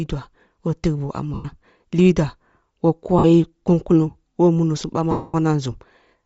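Speech with a grainy, breathy upper band throughout, likely from Bluetooth LC3 compression at about 32 kbps, where noise fills the zeroed highs, unlike steady hiss. Lost LE Audio frames at 1.34–1.45 s, 3.19–3.25 s and 5.11–5.35 s smear into noisy repeats that fade, not hard silent gaps.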